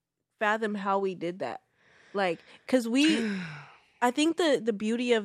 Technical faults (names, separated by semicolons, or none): corrupt frame decoded